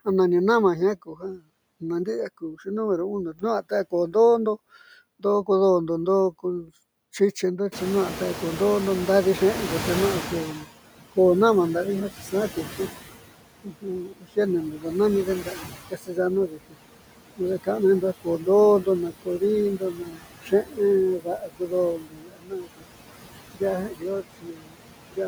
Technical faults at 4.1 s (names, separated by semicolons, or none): noise suppressor artifacts; speech cut by the noise suppressor